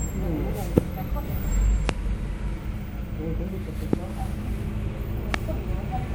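The clip is everyday sound, marked by four loud pops. Each is a single sharp hit lasting about 20 ms, at 0.78 to 0.80 s, 1.89 to 1.92 s, 3.93 to 3.96 s and 5.34 to 5.36 s. They jump roughly 25 dB above the surrounding sound, and the third is a little softer at around 20 dB. The sound carries on unbroken beneath each one. The likely cause is a sudden voltage pulse, from a switch, a plug, static or a driver glitch, entering the signal path.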